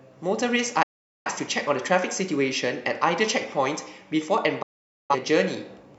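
Speech with two digital broadcast dropouts, from 0.82 to 1.31 s and from 4.62 to 5.15 s. The receiver muted after lost frames, with roughly 8 ms fades, which fits about ten missing frames each time. Both show as flat, blank gaps on waveform and spectrogram.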